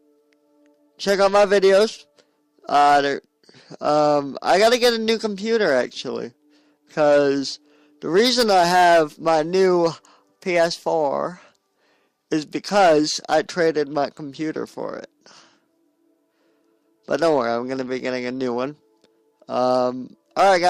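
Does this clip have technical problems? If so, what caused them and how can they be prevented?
No, there is nothing here to trace back to a cause or to prevent, as the recording carries no technical fault of any kind.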